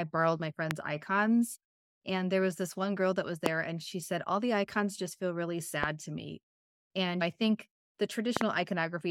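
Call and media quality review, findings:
Loud pop, sharp click over the speech, which continues underneath; peaks roughly 20 dB above it. 0.71–0.73 s after "borrowed my"; 3.46–3.48 s; 5.84–5.86 s between "icons just feel really" and "to me"; 8.37–8.43 s, double pop, after "I think the". Likely a voltage transient, such as a connector, switch or driver glitch, added to the signal path.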